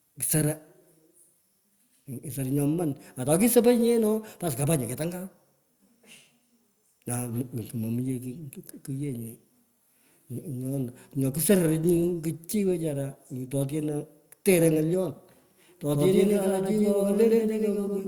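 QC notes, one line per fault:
15.93–18.08 s: doubled audio track. An equally loud copy cuts in abruptly, trailing by about a tenth of a second. Likely a slower duplicate capture path.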